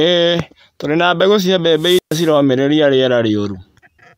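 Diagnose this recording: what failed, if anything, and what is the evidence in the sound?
Wireless microphone squelch dropout in the analogue radio link, 1.74–2.37 s, after "tũrĩ na mbegũ cia": the fading FM signal shows as broadband hiss on the spectrogram, then squelch flattens the waveform for 128 ms.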